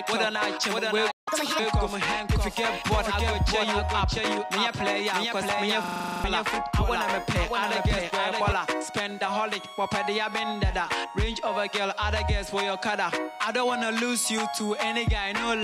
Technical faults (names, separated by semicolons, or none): doubled audio track; playback stall; catch-up at higher speed; system hang loop